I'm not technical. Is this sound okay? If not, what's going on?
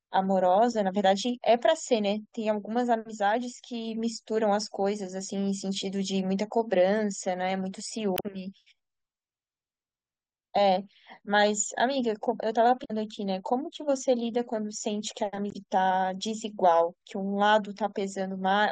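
No. This speech clip has damaged data in a compressed stream at three moments: 8.14 to 8.26 s, 12.81 to 12.91 s, and 15.48 to 15.56 s. Each time, part of the stored file was corrupted, so the player misread that stretch and had to hunt for the next clean piece. You hear a short chirp, squawk, click or brief gap lasting about a tenth of a second.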